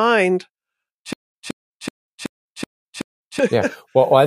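From 1.13 to 3.39 s there's a stutter with silent gaps: a 179 ms scrap of speech repeats six times, each followed by about 197 ms of dead silence, cycling every 377 ms. It's likely a stalled stream replaying its last fragment, so whatever belonged there is gone.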